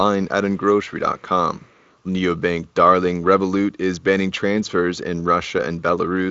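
At 1.2 s, a faint delayed copy of the speech appears briefly. It returns from 1.55 to 1.97 s for a longer stretch. Both times it trails the speech by 268 ms and sits roughly 35 dB below it, so it is a quiet repeat. This is an echo leak, likely from a far-end loudspeaker whose echo canceller left some of the pickup uncancelled. Light Speex coding runs through the whole clip.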